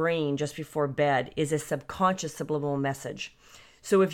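Just speech here, and honestly there's nothing technically wrong to flag anywhere in it.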